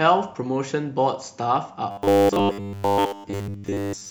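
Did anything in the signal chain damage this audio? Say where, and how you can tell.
Yes. From about 1.91 s right through to the end at 4.10 s, the speech turns into a rigid, metallic drone locked at 100 Hz while still loosely tracing the words. That's robotic sound from repeated short buffers, likely a driver or buffer underrun: audio wasn't arriving fast enough, so the same tiny chunk got replayed to fill the gap, with roughly 70% of the stretch being repeats. A 100 Hz buzz fits a 10 ms buffer looping over and over.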